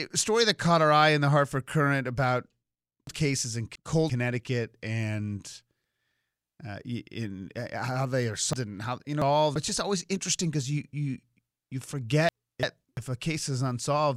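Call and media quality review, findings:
Chunks out of order in speech, 3.07–4.10 s, 8.53–9.56 s, 12.29–12.97 s. Jitter buffer or writer releases a 341 ms chunk late. Speech jumbles at the hard joins. The first two sound two chunks late, the last one chunk.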